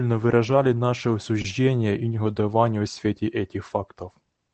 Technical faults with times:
1.41-1.45 short stall from a late packet

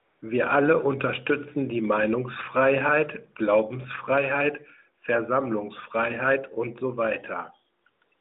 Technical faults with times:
0.00-0.22 AMR comfort noise
7.82-8.20 AMR comfort noise

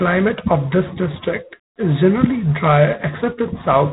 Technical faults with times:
0.00-3.93 G.726 ADPCM

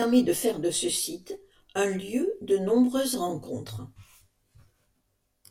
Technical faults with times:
0.00-5.50 channel delay (comb filtering)

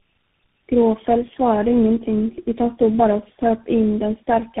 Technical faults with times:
0.00-4.60 tandem speech coding

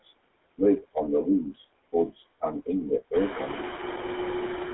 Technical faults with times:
0.00-4.73 noise suppressor artifacts
0.00-4.73 GSM full-rate codec

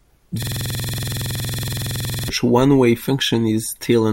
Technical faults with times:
0.43-2.29 system hang loop

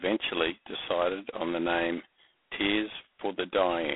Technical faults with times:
0.00-3.96 G.726 ADPCM

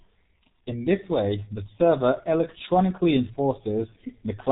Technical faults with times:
0.00-4.51 G.723.1 codec

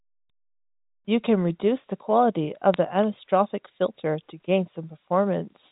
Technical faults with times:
2.74-2.77 bit errors on a digital phone line

